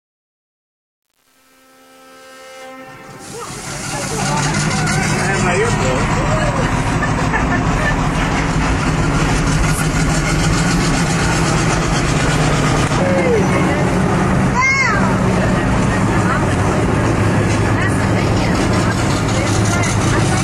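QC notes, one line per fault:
0.00–4.34 s, truncation distortion on a fade: The fade-in from the very start loses resolution at low level, which fits an 8-bit word length with no dither. The waveform becomes coarse steps. Up to 3.58 s it sounds gritty.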